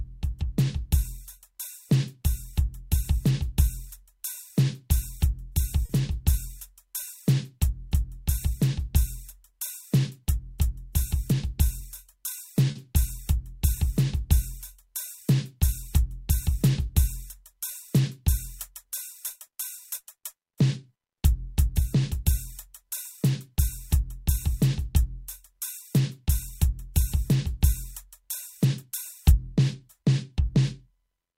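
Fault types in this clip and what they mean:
Short stall from a late packet: A packet arrived too late, and the jitter buffer ran dry. The receiver held the last sound for about 40 ms until the packet turned up. Then it carried on from the same spot, so no music is lost. It happens at 5.85 s and again at 12.71 s. Each time, one moment of the music hangs briefly, with a faint buzz or dip. Each stall also leaves the stream 40 ms later.
Jitter buffer speed-up: Too much audio built up in the jitter buffer, so the receiver worked to shrink the delay. It cut many tiny slices, each one or a few pitch periods long. From 11.02 s to 12.22 s the music plays at 103 percent speed while the pitch stays the same. In total, about 40 ms is trimmed away. The tempo briefly pushes ahead, then settles.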